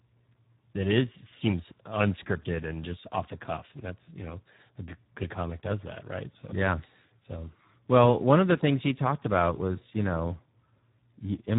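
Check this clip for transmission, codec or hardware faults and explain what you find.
One codec fault runs through the whole speech clip. Throughout, the audio has passed through the Speex codec at a low quality setting, which fits a bitrate of about 8 kbps. At that rate the CELP coder has very little budget for the excitation signal, so the fine detail of the voice source is crudely approximated and the damage is heavy. The speech sounds noisy and hoarse, edging toward a robotic buzz, and nothing remains above 3.8 kHz, leaving it muffled and narrowband.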